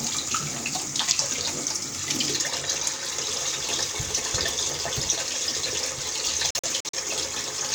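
At 6.50 s the audio starts breaking into short silent holes, and it keeps doing so until 6.98 s. This is a digital broadcast dropout. The receiver stopped getting frames it could decode and muted its output until valid frames came back. About 171 ms of sound goes missing, spread over roughly 430 ms, with no single gap longer than 43 ms. That pattern points to four lost frames. Each hole opens and closes with a 3 ms fade, so the sound stutters rather than clicks. The missing material never returns.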